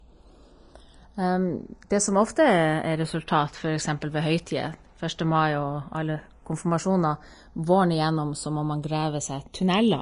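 From start to finish the speech carries channels drifting apart: two pickups on clocks about 70 parts per million apart, their offset growing to around a third of a millisecond. Mixed to mono, this gives a slow flanging sweep, and a spectrogram shows comb notches gliding steadily downward in frequency.

Also throughout, the audio is plainly grainy and hissy, with roughened tones and smeared attacks, and nothing above 10.6 kHz. That flat ceiling on a spectrogram, plus the speckled treble, fits a low-bitrate Vorbis compression, likely around 33 kbps.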